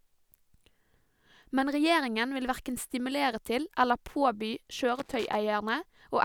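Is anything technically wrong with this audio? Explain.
Yes. From 4.89 to 5.35 s the speech is broken up by loose connector crackle. A worn or dirty contact somewhere in the signal chain is making and losing connection as it shifts, so the signal keeps cutting in and out, and any DC sitting on the line turns each reconnection into a pop. For that half second the result is an irregular burst of scratching and crackle over the voice.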